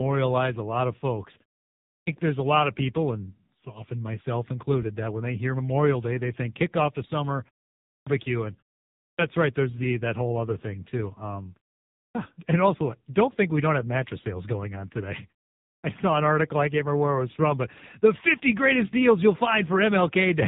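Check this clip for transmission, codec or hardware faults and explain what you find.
One codec fault runs through the whole clip. The AMR narrowband mobile codec leaves nothing above 3.8 kHz. The heavy buzzy, synthetic colouring points to a low mode near 6.7 kbps.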